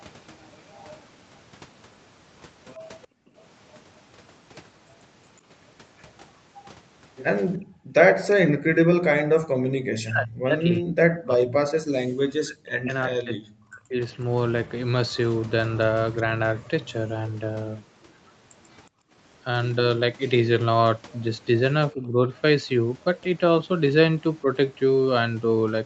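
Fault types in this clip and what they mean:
Echo leak: A faint, delayed copy of the speech returns 364 ms behind the original at about 25 dB down, from 0.69 to 2.75 s and 5.98 to 8.35 s, likely residue that got past an echo canceller. A spectrogram shows weak duplicate harmonic traces trailing the speech.
Background gated by the echo canceller: The room sound is pushed down hard while the other side's audio plays, at 3.07 to 3.36 s, 7.58 to 8.67 s and 18.89 to 19.15 s, dropping by up to about 39 dB. The waveform's noise floor collapses briefly, and the spectrogram shows dark vertical gaps.
Speech suppressed in double talk: While both sides talk, the speech is likely turned down along with the echo. It falls by roughly 40 dB across 9.05 to 14.01 s, and more mildly, around 10 dB, at 21.93 to 24.47 s. The waveform envelope sags.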